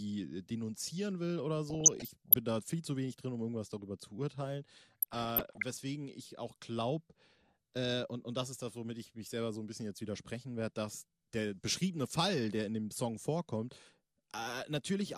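Throughout the speech the sound is dull and grainy, with upper bands dropping in and out and a gurgling edge on the remaining content. That points to MP2 compression, likely at a low rate around 80 kbps, where bands are switched off and the rest coarsely quantised.

From 1.70 to 2.34 s, after "denunzieren will oder" and before "da viel zu wenig", and again from 4.81 to 5.82 s, after "irgendwas darüber zu urteilen" and before "ich auch glaube", DAB burbling appears as short blips of noise in single sub-bands. Uncorrected bit errors, on the order of half a percent, corrupt sub-band samples and scale factors frame by frame.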